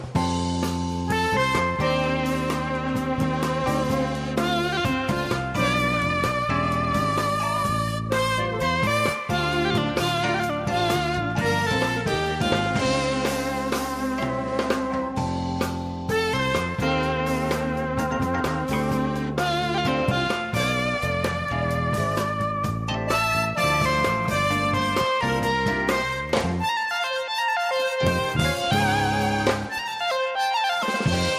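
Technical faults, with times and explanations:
No technical faults detected.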